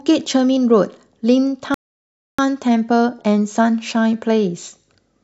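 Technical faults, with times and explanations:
1.74–2.39 s, rebuffering stall: playback runs dry and the speech drops to silence for about 0.64 s, then resumes exactly where it stopped, with nothing lost.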